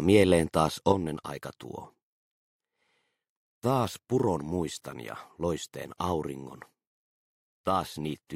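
At 0.92 s the level falls abruptly by about 6 dB and stays down to the end, and anything present only on the lost side disappears. The likely cause is that one channel drops out, halving the shared signal in the mono sum. The waveform envelope halves at once, and a spectrogram dims evenly across all bands.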